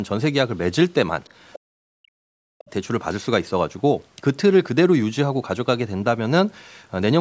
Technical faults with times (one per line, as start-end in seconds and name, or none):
1.24-1.59 other side's voice leaking through
1.63-2.40 speech suppressed in double talk
2.58-2.70 other side's voice leaking through